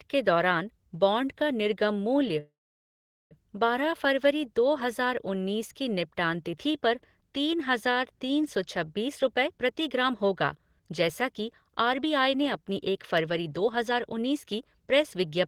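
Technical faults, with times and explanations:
2.39 to 3.34 s, call audio freeze: the sound cuts to a brief fading buzz and then about 0.8 s of silence before resuming right where it stopped. Nothing is lost, but everything after arrives about 0.9 s late. Likely the jitter buffer ran dry while packets were stuck.
9.08 to 15.26 s, jitter buffer speed-up: the audio plays at 113% speed with the pitch unchanged, so it sounds hurried. The receiver keeps snipping out tiny pitch-period slices to clear the backlog, roughly 0.7 s in total.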